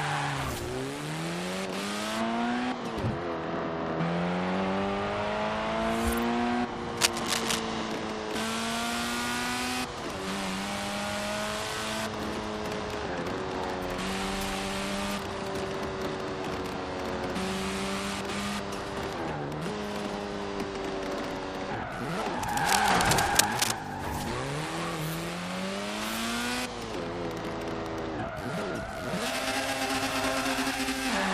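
From 6.97 to 7.60 s, a burst of cable scratch noise covers the sound. It is dense and uneven, a rough scratching and rustling. It sits at about the same level as the sound itself. The same fault returns from 22.43 to 23.72 s and lasts longer, about 1.3 s. The likely cause is a worn cable, connector or control being moved. Its contact resistance then jumps rapidly and injects these noisy bursts.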